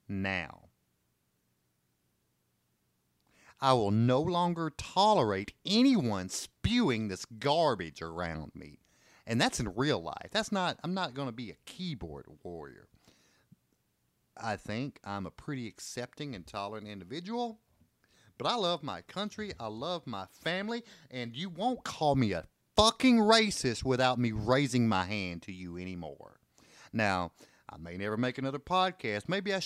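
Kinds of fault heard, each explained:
Nothing stands out here; the speech comes through without any technical fault worth pointing out.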